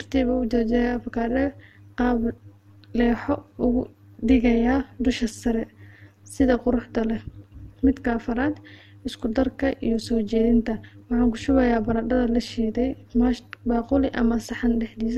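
From start to end, the speech carries overlap-add ripple. The frames were rejoined with an overlap whose gains do not sum evenly. Level dips and swells by about 11 dB once per frame, around 200 times a second. It sounds buzzy, rough and robotic.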